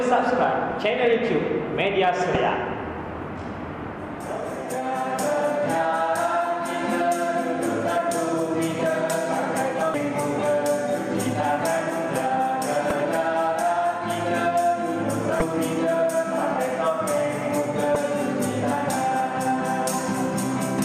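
The audio has damaged data in a compressed stream, heard five times as brief blips. They fall at 2.35 s, 9.91 to 9.94 s, 12.9 s, 15.39 to 15.42 s and 17.93 to 17.96 s. Each lasts between about 10 and 30 ms. At these points some bytes of the encoded stream were corrupt. The decoder could not read those frames properly. It lost sync and hunted for the next valid frame header. That gap comes out as a sharp glitch.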